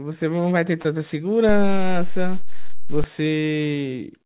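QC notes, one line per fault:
0.82 s to 0.85 s and 3.39 s to 3.43 s, short concealed packet loss: roughly 20 ms and 30 ms of audio failed to arrive in time, and the receiver bridged each gap by extending the preceding sound, repeating its pitch period if voiced or shaping noise if not, before crossfading back. Each is heard as a brief smear or wobble. On the waveform, copied cycles repeat too regularly. On a spectrogram, the harmonics flatten or blur into a short smudge below the 4 kHz ceiling, which fits a G.711 A-law call path.
1.49 s to 3.04 s, DC step: the waveform's zero line jumps to an offset at 1.49 s, holds there, and steps back at 3.04 s. Each jump is a sudden shift in the signal's baseline, so it produces a low thump or click while the speech continues unchanged. On the waveform, the whole trace visibly sits off centre between those times. On a spectrogram, each edge appears as a thin broadband vertical line with energy concentrated at the very bottom.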